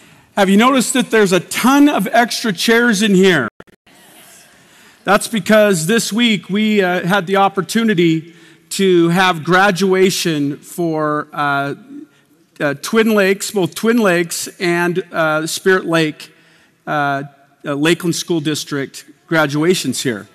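Hard clipping runs through the whole clip. The signal is driven about 9 dB beyond what one stage can pass, so its peaks are sliced flat. Only a small fraction of samples, under one percent, actually hit the ceiling, so the damage shows up as crackle on the loudest moments rather than a constant fuzz. The abrupt flattening adds harsh high harmonics, which sets it apart from the rounder, gentler thickening of soft saturation.

From 3.48 to 3.87 s comes a digital broadcast dropout. The receiver lost valid data and muted until clean frames returned. The sound breaks into several short silent holes scattered across roughly 0.38 s, the longest about 120 ms, with around 312 ms lost in total, which points to roughly a dozen failed frames. The missing material never comes back, and the gaps are true silence rather than smeared or repeated fill, which separates this from packet-loss concealment.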